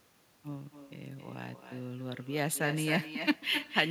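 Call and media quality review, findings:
Speech shadowed throughout by a quieter, thinner repeat, about 9 dB down, trailing about a third of a second behind. Echo with no canceller: far-end loudspeaker picked up by far-end mic, returned over network round trip unremoved.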